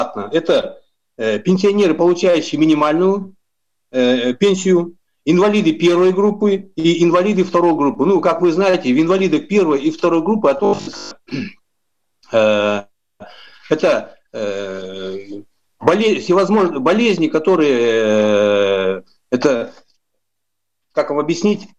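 From 10.57 to 11.11 s, the sound turns robotic, from repeated short buffers. It becomes a rigid, metallic 50 Hz buzz. The likely cause is audio arriving too seldom, so roughly 20 ms chunks repeat and replace most of the real audio.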